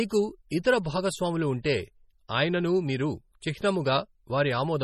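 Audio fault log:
throughout: MP3 compression, likely from a starved bitrate around 32 kbps. Nothing above 12.8 kHz survives, and weak detail flickers, giving heavy, watery, swirly speech.
0.49 s, 0.63 s, 1.63 s, 2.28 s (just before "అయిననూ మీరు"), 3.41 s (just after "అయిననూ మీరు"): pre-echo. Block-wide quantisation noise leaks ahead of sharp attacks, leaving 12 to 19 ms of hiss and softened onsets.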